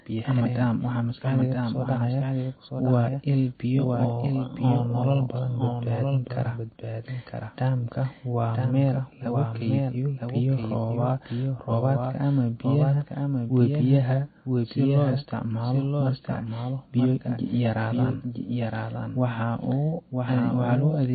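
Throughout the speech, a doubled audio track sits under the original: a second full-band copy trails by about a second at roughly 5 dB quieter, likely from a second, slower capture path. Unlike a room echo, it has no decay or reverberant colour. MP3 compression, also present throughout, is plainly audible, with nothing above 4.6 kHz. The result sounds watery and swirly with smeared attacks, likely from a low bitrate near 26 kbps rather than a simple low-pass filter.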